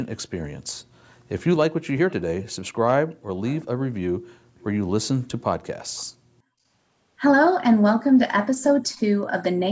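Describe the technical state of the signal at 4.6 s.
At 4.6 s the background is gated by the echo canceller, in a dip running from 4.44 to 4.62 s. While the far-end loudspeaker was active, the canceller clamped the microphone path by about 40 dB, so the room tone sinks almost to silence for roughly a fifth of a second before recovering. Unlike a packet-loss dropout, the cut follows far-end playback rather than landing at random, and the room sound returns once the canceller lets go.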